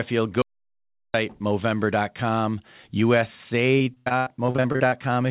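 At 0.42 s the speech cuts off abruptly into complete silence, with no room tone underneath, and resumes mid-flow at 1.14 s. About 0.72 s of speech is simply gone. This is an audio dropout to silence, most likely from the input being briefly lost while the recorder kept writing silence. On a waveform it appears as a flat line. On a spectrogram it is a fully black vertical band with hard edges on both sides.

From 3.78 s to about 4.94 s the sound turns choppy: repeated packet loss with a robotic character. About a dozen short holes fall in quick succession, the longest around 83 ms. Each one is patched by stretching the preceding sound, so roughly 38% of that stretch is synthetic fill rather than real speech. On a spectrogram this shows as smeared, repeating harmonic blocks and abrupt discontinuities. The waveform shows periodic, copy-like segments with sharp joins. The whole clip also has nothing above 4 kHz, which fits a narrowband telephone codec.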